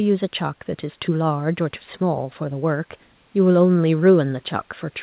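No faults are audible in the speech, with faint room noise sitting about 40 dB below it and a band limit with nothing above 4 kHz that fits a narrowband call codec such as G.711 mu-law at 64 kbps.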